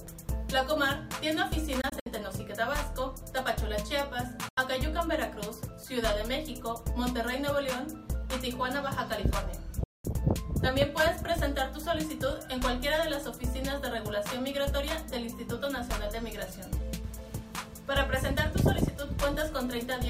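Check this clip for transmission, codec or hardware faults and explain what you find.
Three short gaps break up the audio, most likely from a Bluetooth dropout. They fall at 1.81 to 2.07 s (about 100 ms missing in several holes, the longest 61 ms), 4.49 to 4.58 s (81 ms) and 9.84 to 10.05 s (203 ms). When audio packets reach the headphones too late, they are discarded. The sound cuts to silence, then resumes further along, as though it had kept playing through the gap.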